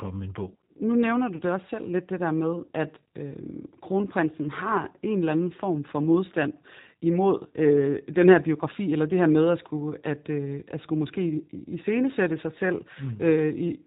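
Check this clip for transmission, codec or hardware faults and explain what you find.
Two faults are audible: codec coloration across the whole speech clip, and one brief dropout.

Throughout, the speech is dull, slightly rough and synthetic, with nothing above 4 kHz. This is the G.729 codec, which fits 8 kbit/s, rebuilding speech from a filter, a pitch predictor and a few pulses per frame.

From 1.36 to 1.41 s, between "nu nævner du" and "det også selv lidt", the sound smears into a fading tone or noise. This is VoIP packet loss concealed by the speech codec: about 30 ms went missing, which fits a single lost packet, and the decoder stretched the last frame.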